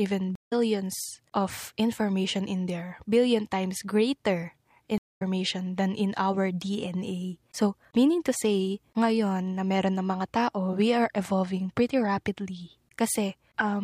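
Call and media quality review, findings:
Stream reconnect, 0.35–0.53 s and 4.98–5.22 s ("times greater" / "than in our"): 0.13 s and 0.2 s silences, speech resumes about 150 ms on; dropped connection, decoder restarted mid-stream.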